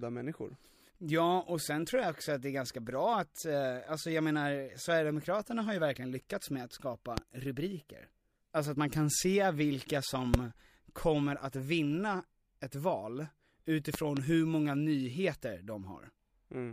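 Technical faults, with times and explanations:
7.18–7.20 s, 10.34–10.37 s, 13.94–14.19 s: loud pop, single sharp thumps after "verkligen lyckats med att" and "man kan se vilka", then a double pop just before "hur många nyheter". They peak about 20 dB over the speech, the double somewhat less. The likely cause is a voltage step from a plug, switch or static, which is shaped into a rounded pulse. Unlike a dropout click, speech carries on underneath without a gap.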